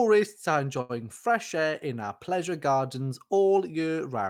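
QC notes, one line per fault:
0.81–0.91 s, short stall from a late packet: the sound hangs for a moment, with one stretch held out unnaturally long, carrying a faint buzzy or slightly dipped quality before the speech picks up again with nothing skipped. A packet arrived late and the jitter buffer ran dry, so the receiver extended the last audio for about 80 ms to cover the gap, then resumed exactly where it stopped. Everything after plays about 80 ms later than before.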